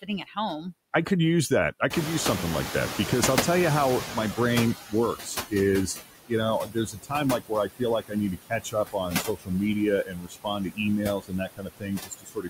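Noise suppressor artifacts run through the whole clip. The suppressor pulls the steady background down by about 17 dB frame by frame, so the noise dips between phrases and swells back under them.

Speech cut by the noise suppressor appears first from 0.02 to 0.64 s. The suppressor mistakes soft speech for background and turns it down by up to about 12 dB, roughly a sixth of a second in total, so quiet sounds and endings come out swallowed.

The noise suppressor is catching up from 1.9 to 5.55 s. The room noise jumps by about 22 dB near 2 s and settles only about 10 dB below the speech. The suppressor's noise estimate lags behind that jump, so the noise at first comes through with less reduction. It then sinks over about 3.65 s until roughly 14 dB of reduction is restored.

Speech cut by the noise suppressor returns from 4.86 to 5.53 s, now with drops of up to about 21 dB over roughly 200 ms. 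From 6.65 s to the end it recurs repeatedly, again as deep as about 21 dB and about 3 s in total, leaving consonants and quieter stretches faint or swallowed.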